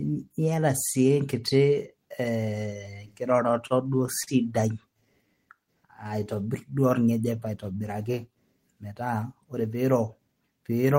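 Speech, with three timing faults from a receiver fighting uneven packet delivery. From 3.49 to 4.29 s there are repeated stalls, a stutter. The flow catches five times. Packets arrived late, so the jitter buffer ran dry each time. The receiver held the last sound over the hole. About 97 ms was filled this way, roughly 12 percent of that stretch, and the longest gap lasted 42 ms. Nothing is lost. The speech just hitches and drags. Next comes a jitter buffer slow-down, from 4.97 to 6.71 s. The buffer was low and needed a reserve. The receiver repeated single pitch periods and pieces of pauses, over and over. That added 149 ms, so the speech runs at 92 percent speed. The pitch stays the same. Sounds are drawn out, with a faint warble at times. Later, from 8.84 to 9.85 s, there is a jitter buffer speed-up. Here the buffer held too much audio, as when delayed packets arrive in a bunch. To cut the delay, the receiver trimmed short slices of one or a few pitch periods, many times in a row. 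About a tenth of a second disappears. The speech runs at 111 percent speed, with the pitch unchanged, and it sounds hurried.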